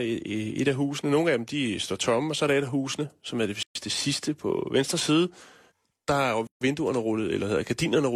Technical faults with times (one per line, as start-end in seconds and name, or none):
3.63-3.75 gap at a join of encoded pieces
6.47-6.61 gap at a join of encoded pieces